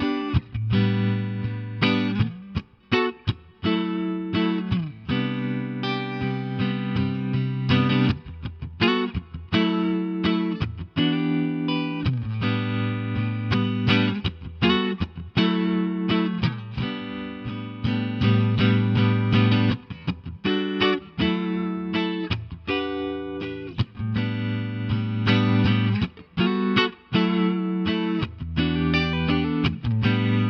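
Nothing stood out as a technical problem on listening to this audio.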